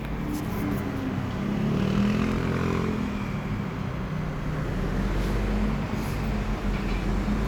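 Two clocks that likely disagree by something like 500 parts per million let the buffer between them drift until a block of about 50 samples is dropped or repeated, the pattern of clock drift buffer slips. In this recording of sounds, that produces about four short clicks spaced regularly every 1.87 s, from 0.45 s to 6.06 s. Each slip is a tiny discontinuity in the waveform, heard as a brief tick while the sound plays.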